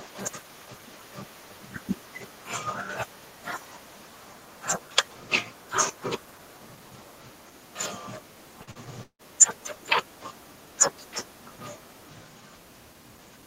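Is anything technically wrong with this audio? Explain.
Yes. Short concealed packet loss occurs twice, at 8.63 to 8.70 s and 8.71 to 8.78 s. Each time about 40 ms of audio failed to arrive, and the receiver bridged the gap by extending the preceding sound before blending back, leaving two quick smeared wobbles in the speech.

A long network dropout is the likely cause of the gap from 9.03 to 9.22 s. About 160 ms of speech is missing. The last sound is stretched into a fading buzz or hiss, then about 80 ms of near-silence follows before the speech resumes.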